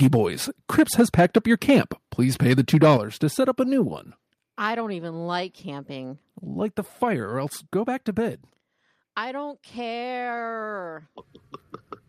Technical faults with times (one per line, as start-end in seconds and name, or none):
0.02-0.16 microphone overload
0.03 microphone volume stepped down
0.78-1.80 microphone overload
2.51-2.94 microphone overload
2.97 microphone volume stepped down
3.99 microphone volume stepped down
8.28 microphone volume stepped down